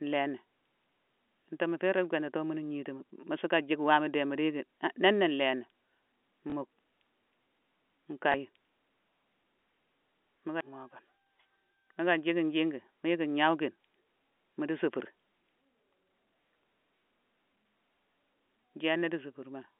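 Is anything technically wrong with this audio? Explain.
Yes. Packet loss with last packet repeated hits at 6.50–6.52 s and 8.32–8.34 s. About 20 ms goes missing each time, which fits one lost packet, and the previous chunk is replayed out of step with the pitch. This causes a small blip. The waveform shows a duplicated segment with a step at each join, and the spectrogram a thin vertical smear. The G.711 telephone path gives the sound its narrow 250 Hz to 3.4 kHz band.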